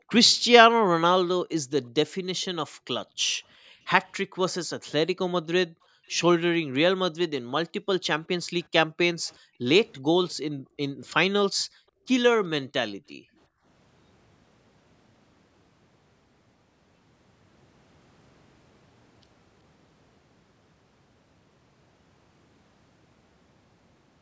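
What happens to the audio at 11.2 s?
At 11.2 s you're inside a stretch of background gated by the echo canceller, running from 9.39 to 12.05 s. While the far end plays, the canceller clamps the mic, so the room sound drops by up to about 40 dB, around a second in all, then returns.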